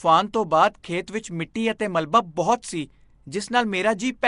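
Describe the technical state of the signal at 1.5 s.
At 1.54 s a brief burst of pre-echo, spreading about 12 ms, puts a short hiss just ahead of a sharp speech onset and softens that attack. Quantisation noise sized for the loud onset is spread across its whole transform block, so it fills the quiet moment before the attack. Underneath, the entire passage carries a rough, hissy, underwater coloration with nothing above 10.6 kHz, likely Nellymoser compression at a rate consistent with around 44 kbps, where weak bands get no bits and are replaced with noise.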